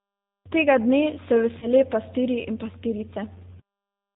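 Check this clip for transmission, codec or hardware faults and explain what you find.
Two faults are present: G.729 codec damage across the whole speech clip, and two dropouts patched by codec packet loss concealment.

G.729 codec, throughout: the speech is rebuilt from a vocal tract filter, a pitch predictor and a few pulses per short frame, which fits G.729A at 8 kbit/s. Nothing above 4 kHz survives, so the audio sounds muffled, rough and plainly synthetic.

VoIP packet loss concealed by the speech codec, at 1.59 to 1.67 s and 3.10 to 3.13 s: about 30 ms and then 10 ms of audio were lost. The decoder filled each gap by repeating its last pitch and filter at falling gain, producing a brief, fading smear.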